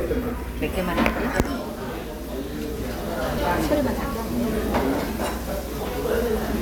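A short sound recording carries damaged data in a compressed stream, heard as brief glitches at 0.61, 3.37 and 5.78 s. Corrupted bytes make the decoder misread frames and lose sync.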